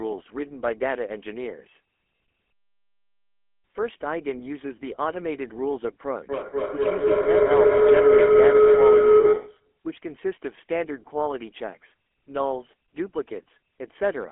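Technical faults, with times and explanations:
Throughout: GSM full-rate codec. The speech carries the buzzy, gravelly roughness of the original GSM coder, which rebuilds the vocal tract from a model driven by a sparse, regular pulse excitation. The line is confined to roughly 250 Hz to 3.4 kHz, and the damage is plainly audible.
6.29–9.77 s: feedback howl. Two devices in one room share the call, and each pass from loudspeaker back into microphone adds gain. Repeats narrow onto a tone around 400 Hz, coming back roughly every 200 ms, and peak about 11 dB above the speech.
9.2 s: lost GSM frames. A 40 ms gap, consistent with two dropped frames, is filled by repeating the last good frame's parameters. That produces a short, rough metallic ring rather than silence, set within the howl.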